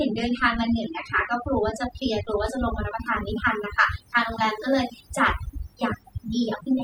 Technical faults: overdone noise removal

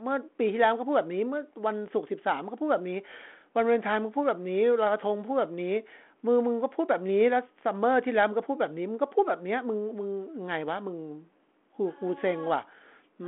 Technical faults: none

